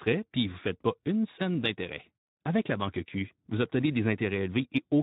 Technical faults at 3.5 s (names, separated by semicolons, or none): Speex codec